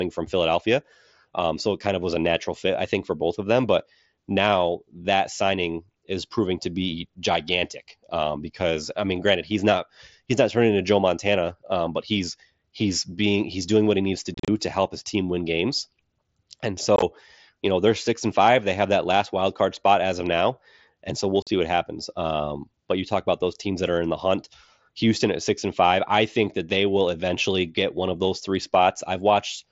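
At 14.34 s, after "what he needs to", the speech breaks into short holes before "to help his team". This is unconcealed Bluetooth headset packet loss. About 105 ms of sound goes missing across 0.14 s. The longest gap is near 38 ms. Silence or an idle pattern replaces the lost packets, so the edges are abrupt and the sound turns chopped and crackly. At 16.96 s, 45 ms drops out over 60 ms before "you know they're six". At 21.42 s, after "now and so we'll", another 45 ms vanishes before "what happens".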